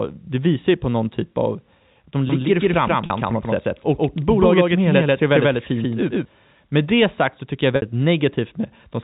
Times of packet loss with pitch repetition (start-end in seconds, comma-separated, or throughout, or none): 3.06-3.10, 7.76-7.82